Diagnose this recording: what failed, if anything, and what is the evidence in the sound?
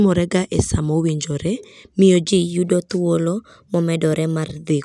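From 2.28 s, just after "e sa mowinjore miyo", the speech turns slightly high and hurried until 4.70 s: it runs about 1.09 times too fast and sits roughly 1.5 semitones sharp, with tempo and pitch shifted together. That locked pairing is the signature of a wrong sample rate at the playback stage. The samples are clocked out faster than they were captured, with no resampling, which fits audio recorded at 22 kHz being played at 24 kHz.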